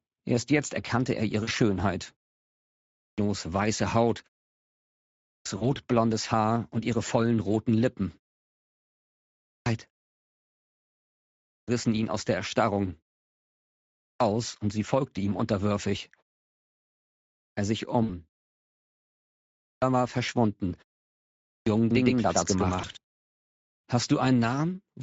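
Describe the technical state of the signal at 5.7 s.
At 5.7 s you're right at the tail of a VoIP packet loss concealed by the speech codec, running from 5.57 to 5.70 s. Roughly 40 ms of audio went missing, which fits two lost 20 ms frames. The decoder filled the gap by carrying its last pitch and filter forward at falling gain, so the sound smears into a buzzy tone or coloured noise that fades. Because each frame builds on the one before, it stays weak or distorted for a moment after the stream comes back.

Underneath that, the whole clip carries Speex codec damage that's plainly audible, which fits a mid-range setting around 16.8 kbps. The excitation is coarsely coded, so the speech comes across hoarse and noisy, and any top band above 4 kHz is just shaped noise fill.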